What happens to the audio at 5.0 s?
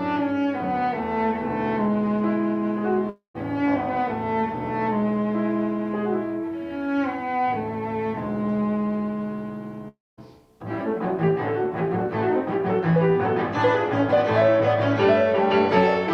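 Nothing goes wrong at 5.0 s: the audio plays through that moment cleanly, with no dropout, click, distortion or other fault.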